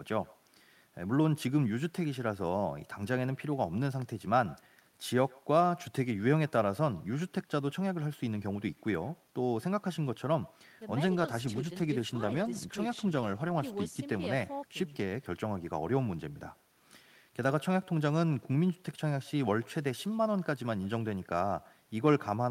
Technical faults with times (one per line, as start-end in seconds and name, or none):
0.00-22.50 echo with no canceller
11.09-16.49 call bitrate drop